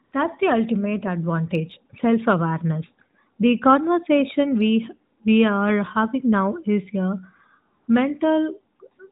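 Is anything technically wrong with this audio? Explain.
Yes. AMR comfort noise appears three times: from 0.04 to 0.12 s (80 ms), from 5.18 to 5.20 s (20 ms), and from 7.82 to 7.88 s (60 ms). In each gap, the sending phone decided the talker was silent and stopped transmitting speech frames. The receiver then generated artificial noise from a rough description of the background's level and spectral shape, so the real ambience drops out and a smooth, steady hiss briefly switches in. The speech itself carries the light narrowband coloration of AMR-NB, which fits its 12.2 kbps mode.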